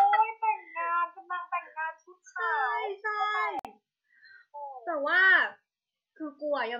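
A speech recording with a gap at a join of encoded pieces, running from 3.59 to 3.65 s: about 55 ms of silence cuts into continuous speech, which then resumes exactly where it stopped. It comes from separately encoded segments spliced without trimming, so one run's padded final frame and the next run's start-up delay both remain. On a waveform it shows as a flat stretch with softened edges; a spectrogram shows a clean vertical blank band, its borders slightly blurred by the codec.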